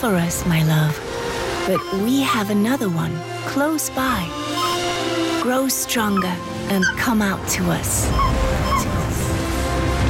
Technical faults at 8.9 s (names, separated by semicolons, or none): processor overload crackle